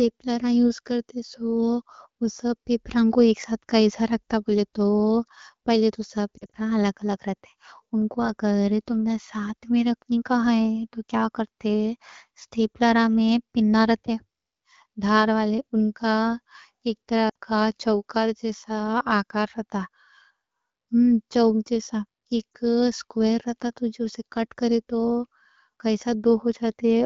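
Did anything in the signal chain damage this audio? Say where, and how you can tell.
Yes: lost AMR speech frames, caused by radio errors on the network leg before the wideband AMR decoder. After "پہلے تو", 6.38 to 6.56 s warbles, with about 100 ms concealed in bursts of 40 ms or less. After "ایک طرح", 17.29 to 17.36 s loses 60 ms. After "چوک جیسا" there is one brief dip at 22.54 s. The decoder replays the last pitch and vocal tract settings at falling gain, so spectrograms show frozen, fading harmonics, and the waveform shrinks before returning weak.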